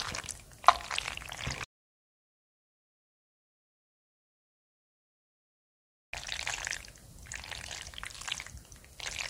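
An everyday-sound recording cuts abruptly to dead silence at 1.65 s and returns mid-flow at 6.13 s. This is an audio dropout to silence, likely from a disconnected device, failed link or stray mute, losing about 4.48 s.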